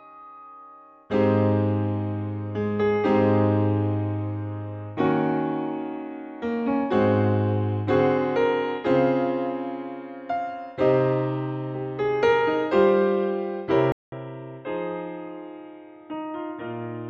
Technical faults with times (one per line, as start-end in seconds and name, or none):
13.92-17.10 input switched to a poorer device